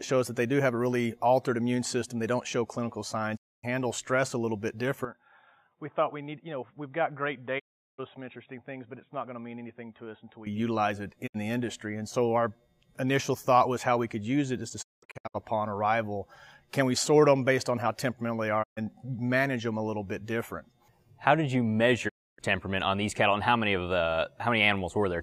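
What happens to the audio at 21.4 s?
Nothing goes wrong at 21.4 s; the audio runs through that moment intact, with no dropout, click or distortion.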